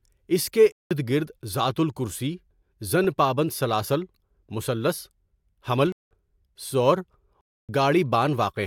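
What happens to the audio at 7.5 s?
Corrupted compressed frames were rejected by the decoder and replaced with silence, a corrupt frame muted fault. From 7.41 to 7.69 s the speech cuts abruptly into a 0.28 s hole, which fits about three frame lengths, then resumes with its timing intact.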